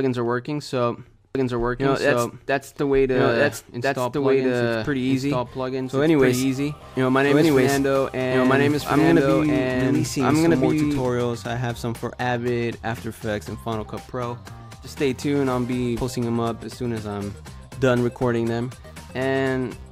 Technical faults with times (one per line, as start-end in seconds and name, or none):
1.35-11.09 doubled audio track